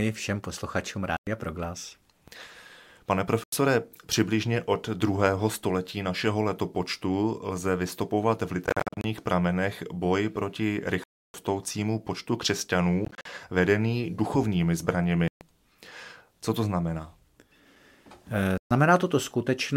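Seven short silences cut into the sound at 1.17–1.27, 3.44–3.53, 8.66–9.04 (broken into several gaps), 11.04–11.34, 13.05–13.26 (also broken up), 15.28–15.41 and 18.58–18.71 s. These are likely Bluetooth dropouts from late or lost packets, and they differ from a buffer underrun because the sound returns further along rather than picking up where it stopped.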